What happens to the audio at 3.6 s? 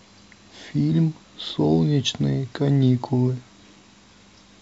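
Nothing goes wrong at 3.6 s; the speech there plays through intact, with no dropout, click or distortion.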